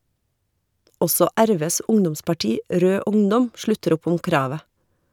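Nothing in this short speech recording stood out as a technical problem on listening.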